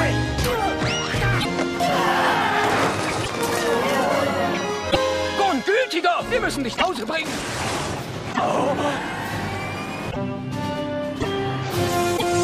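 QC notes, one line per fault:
1.40, 3.23, 4.90, 6.75, 8.32, 10.10, 11.20 and 12.16 s: broken MP3 bit reservoir. Each brief glitch lasts about 60 to 70 ms and the sound jumps ahead. This is likely from missing frames, about 26 ms each, forcing later frames to decode borrowed reservoir bytes wrongly.
2.64 to 3.95 s: train of clicks. Roughly fifteen similar clicks arrive unevenly, about 10.5 per second, peaking about 15 dB above the sound.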